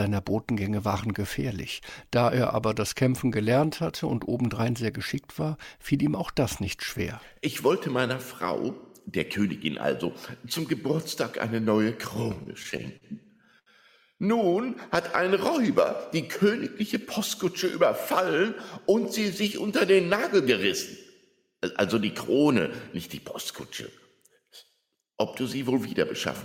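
Repeated stalls (stutter) run from 12.43 to 13.69 s. Packets reached the receiver late or more slowly than playback used them, so its jitter buffer ran dry eleven times. Each time, the last sound was stretched forward until fresh audio arrived: about 210 ms in all, roughly 17% of that stretch, with the longest hold lasting 76 ms. Nothing is lost, but the sound drags and catches in a halting, stuttering rhythm.

A jitter buffer speed-up follows from 24.22 to 25.03 s. The buffer had built up more audio than it targets, so the receiver trimmed many tiny pitch-period-length pieces in quick succession, shedding about 70 ms. Playback runs at 108% speed while the pitch stays put, so this short passage sounds hurried and rushed forward rather than higher.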